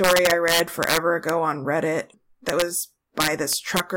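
Gain pushed the speech past the integer limit and let it wrap instead of clamping, an integer overflow, at 0.04–1.29 s, 2.49–2.62 s and 3.20–3.80 s, overdriven by about 3, 2 and 4 dB. Loud peaks flip to the opposite extreme, giving harsh cracks far sharper than clipping.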